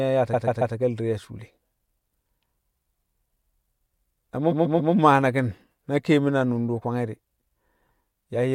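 Speech with two bursts of repeated frames: from 0.33 to 0.75 s and again from 4.51 to 4.93 s, just before "mmaa naki̱n na keemin", a 139.3 ms block plays three extra times, stuttering and adding 418 ms each time. The block length fits about six compressed frames resent or rewritten. A spectrogram shows identical 139 ms slices side by side, and the waveform repeats the same shape exactly.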